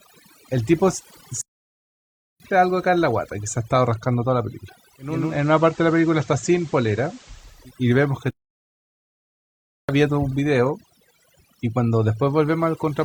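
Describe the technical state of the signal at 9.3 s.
At 9.3 s the output is silent. The point falls inside a playback stall running from 8.30 s to 9.89 s, a gap of about 1.58 s where the speech stops in mid-flow. The likely cause is the player running out of data or its playback thread being blocked, so nothing reached the output until it recovered. The sound returns at 9.89 s.

The whole clip also shows overdone noise removal, so it shapes the speech on either side of the gap. The reduction was set too strong. It pulls individual frequency bands far down or shuts them off whenever they sit near its noise estimate, and quieter parts of the voice are cut along with the noise. As a result the background level is lowered and breaks into twinkling, warbling specks instead of a steady noise floor.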